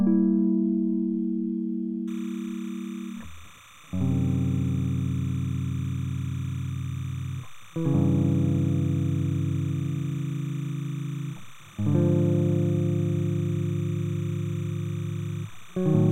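From 2.08 s right through to the end there's timecode bleed: linear timecode from a nearby track or cable has leaked in, flipping between roughly 1 and 2 kHz. It sits about 25 dB under the music as a steady chirping warble, which fits 29.97 fps code.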